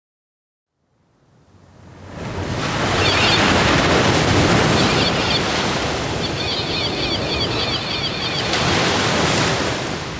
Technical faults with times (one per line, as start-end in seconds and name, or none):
0.00-10.20 gain pumping